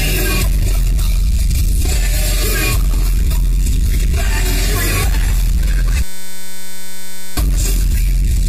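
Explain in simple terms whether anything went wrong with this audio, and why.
From 6.03 to 7.37 s there is a system hang loop. The computer froze and one 5.33 ms scrap of sound repeated, producing a steady 188 Hz buzz.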